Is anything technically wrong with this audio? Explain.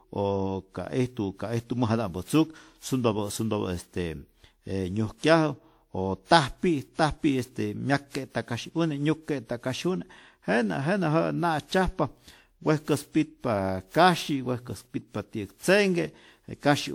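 Yes. Generation loss runs throughout the speech, likely from around seven lossy encoding passes, pointing to WMA near 96 kbit/s. It sounds swirly, hollow and smeared, with blurred attacks.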